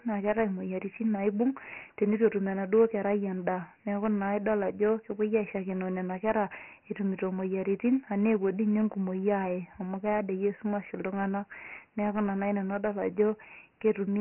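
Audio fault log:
Throughout: Dialogic VOX ADPCM. The speech is band-limited, with nothing above 3 kHz. That cut-off points to a 6,000-samples-a-second stream, and the 24 kbps rate fits 4-bit samples at that rate. Each sample stores only a coarse 4-bit difference from a prediction, so the waveform is rebuilt in rough steps. The damage is heavy. A gritty, rasping hiss rides on the speech and moves with it. The sound is dull and coarse.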